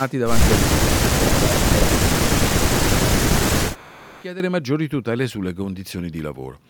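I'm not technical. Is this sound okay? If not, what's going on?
No. Echo leak at 0.0 to 0.11 s and 3.74 to 4.24 s: a faint copy of the voice returns about a quarter to a third of a second late, likely from a loudspeaker the echo canceller didn't fully cancel.

Speech suppressed in double talk at 0.76 to 1.38 s, 1.75 to 2.5 s and briefly at 4.04 to 4.12 s: the voice dips sharply, likely because the echo canceller mistook it for echo while both sides talked.

Sudden gain jump at 2.68 s: the whole sound abruptly gets much quieter, then jumps back at 4.4 s, likely from a volume setting applied instantly without a smooth fade.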